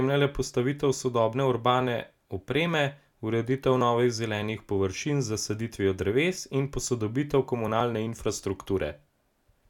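Audio missing between chunks shows up at 3.81 s and again at 7.80 s in this speech clip: at each point a tiny slice of sound, well under a hundredth of a second, drops out and the audio on either side butts straight together with no gap of silence. The two skips fall four seconds apart, which points to a recorder or processor likely handling the signal in 4-second blocks and losing a sliver at every handover.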